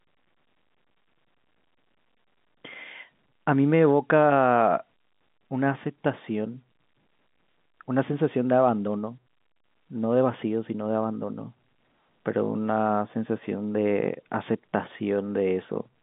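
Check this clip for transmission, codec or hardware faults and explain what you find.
Nothing wrong can be heard in this recording.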